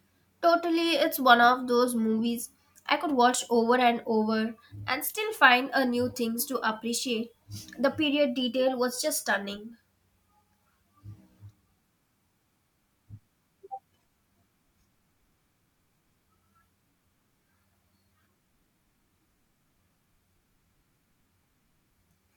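Nothing here trips any technical alarm, and the speech simply runs along from beginning to end with no dropouts, glitches or other faults to point at.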